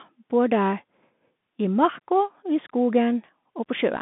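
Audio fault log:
Throughout: Bluetooth CVSD headset codec. The spectrogram shows a hard band from 150 Hz to 3.6 kHz, and one-bit delta steps add scratchy s sounds and granular hiss, consistent with 64 kbps CVSD.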